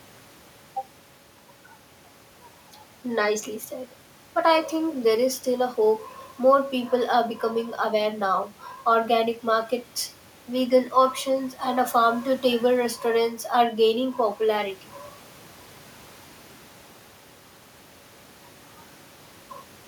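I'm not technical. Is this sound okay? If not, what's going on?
Yes, this speech recording is in good technical shape, with nothing in the signal that points to a recording or playback problem.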